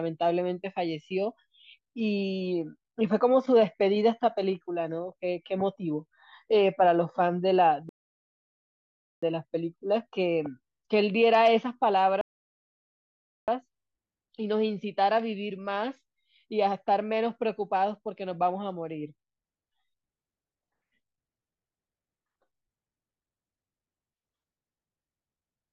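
At 7.89 s and again at 12.21 s the speech halts in rebuffering stalls, silent for 1.33 s and 1.27 s while the player waits for data, then resumes exactly where it stopped.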